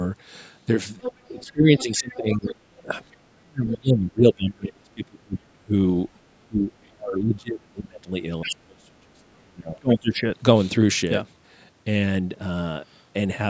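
A speech clip in which a second voice, the other side's voice leaking through, appears from 1.01 to 3.16 s at roughly 10 dB below the talker, briefly at 3.71 to 3.76 s, barely audibly at 6.82 to 6.86 s, and again at 8.42 to 8.52 s at around 10 dB down. The likely cause is loudspeaker playback on the talker's device reaching the microphone and not being fully removed by the echo canceller. The talker's own speech is suppressed in double talk from 1.28 to 5.72 s and from 6.36 to 10.24 s. The level dips by as much as about 30 dB, with around three seconds of each span pulled down, likely because the canceller could not separate near-end speech from the echo and attenuated both together.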